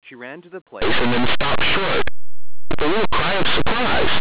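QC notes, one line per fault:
0.82 to 4.20 s, linear audio read as companded: the speech abruptly turns into harsh, very loud distortion that lasts to the end of the clip, with even quiet passages blaring. Plain linear 8-bit samples are being expanded as if they were mu-law codes. Small values just on one side of zero decode to the largest outputs while those on the other side stay small, so low-level signal is thrown to the extremes and the waveform is shredded.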